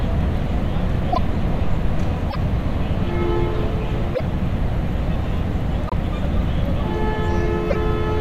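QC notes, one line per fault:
1.12–1.18, 2.29–2.36, 4.14–4.21, 5.87–5.93 and 7.69–7.76 s: broken MP3 bit reservoir. The audio skips forward, and each skip is followed by about 64 ms of chirping noise or near-silence. This is likely frames decoding against reservoir bytes that belong to frames which were dropped, with roughly two or three 24 ms frames garbled each time. A spectrogram shows smeared broadband or chirp-shaped bursts at these points, and the waveform shows an abrupt discontinuity.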